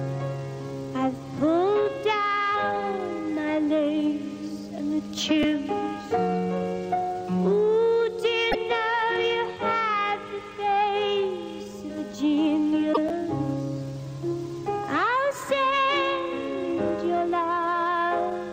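At 5.43 s there's a quick garbled moment, which is chunks out of order. A tiny slice of audio, about 5.3 ms, landed one chunk late and played after the slice that should've followed it. Nothing's missing, but the swapped order leaves hard joins. The same thing happens again at 13.09 s, this time two chunks late, so the jumble is a touch longer.

In between you get repeated frames. From 8.51 to 8.55 s a 24 ms block plays twice, giving a short stutter. From 12.93 to 12.98 s a 48 ms block (two frames) gets the same treatment, so that stutter is a bit longer. Together the two repeats stretch the audio by 72 ms.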